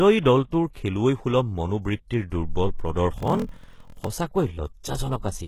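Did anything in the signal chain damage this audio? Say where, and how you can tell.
Yes. Throughout, the speech sounds gritty and lispy, and a spectrogram shows smeared, copied treble. This is likely HE-AAC compression at a very low bitrate, around 16 kbps.

At the codec stage, pre-echo sits at 0.73–0.75 s: about 27 ms of hiss smears ahead of an attack. A waveform shows a noise skirt before the transient.

From 3.16 to 4.07 s, a buffer-stage block size mismatch (padded) inserts zero gaps, which fits 1024-sample writes. This produces a 41.7 Hz buzz and slows the audio to 0.889× speed, with regular dropouts visible on the waveform.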